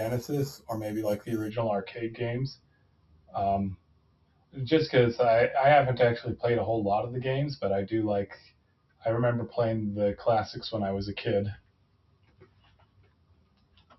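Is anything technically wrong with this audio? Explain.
Yes. Imaging from sample-and-hold upsampling affects the speech from 0.0 to 1.5 s. The audio appears to have been raised from a 12 kHz rate to 48 kHz by repeating each sample with no smoothing filter. This leaves mirrored copies of the spectrum, the first spanning 6 to 12 kHz at about 22 dB below the signal. It sounds like a bright metallic fizz that rises and falls with the voice.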